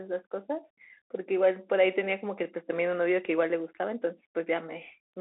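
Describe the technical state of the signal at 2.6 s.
At 2.6 s the sound carries the Bluetooth CVSD headset codec, which runs through the whole clip. Each sample is coded as a single up-or-down bit with an adapting step size, which fits a 64 kbps CVSD stream, and the speech is confined to a phone band of roughly 300 Hz to 3.7 kHz, with nothing above 3.9 kHz. The codec damage is plainly audible: steep, loud high content outruns the step and distorts, s sounds turn scratchy, and a granular hiss sits beneath the speech.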